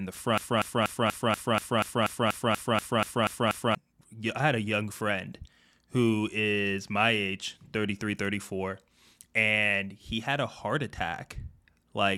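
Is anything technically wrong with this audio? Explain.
Yes. From 0.38 to 3.75 s there is a broken-record loop: a 0.24 s speech fragment repeats 14 times back to back, likely from a stalled stream resending its last buffer.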